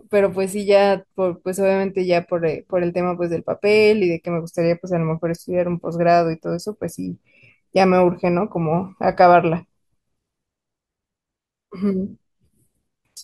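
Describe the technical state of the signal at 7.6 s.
At 7.6 s the speech signal is intact, with no audible fault at that moment.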